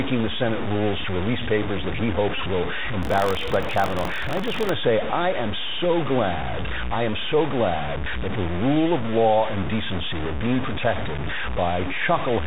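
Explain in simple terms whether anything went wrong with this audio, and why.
Gritty, grainy distortion runs through the whole recording and roughens the quiet parts of the speech. The likely cause is low bit depth without dither: the sound is stored with only a few coarse steps, and rounding to those steps leaves errors that track the audio.

Throughout, the speech is also muffled and thin, s sounds come out scratchy, and a fine hiss sits underneath. That is the Bluetooth CVSD headset codec. It passes nothing above about 4 kHz and cannot keep up with sharp sounds.

From 2.36 to 2.41 s, just after "release papers that he", there is a brief buzzy stutter. This is a Bluetooth headset packet repeated: lost pieces of audio were filled by replaying the previous piece.

From 3.01 to 4.70 s, just before "to say I am", the speech takes on a robotic rattle at about 47 Hz. That is buffer tearing. 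The playback and writing positions in the audio buffer slipped, so each chunk mixes in a sliver of audio from about 70 ms earlier, which fits a 1024-sample buffer.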